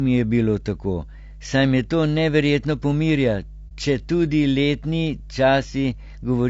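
You're hearing a short speech clip with three things going on. A steady mains hum sits under it the whole way through: a low 50 Hz tone, roughly 20 dB below the speech. That's power-line energy getting into the signal, most often from a ground loop between pieces of kit or a transformer sitting too close to a cable or input. The voice itself sounds rough and grainy throughout, with a noisy fill between the harmonics and a top end that feels thin and a bit synthetic. That's plainly audible codec damage, likely from low-delay AAC compression of the AAC-ELD kind used on video calls, at a bitrate that sounds to be around 32 kbps. Its short frames can't resolve pitch harmonics cleanly, and at that rate there aren't enough bits to go round. Then, from about 3.68 to 3.72 s, there's a brief dropout where the sound fades out and comes straight back, a brief dip of roughly 30 ms. That's AAC frame loss with muting, consistent with one lost frame. 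The decoder zeroed that frame's spectrum and the overlapping windows smoothed the edges into a quick fade rather than a hard cut.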